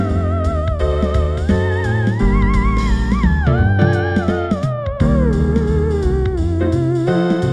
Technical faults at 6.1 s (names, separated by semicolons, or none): none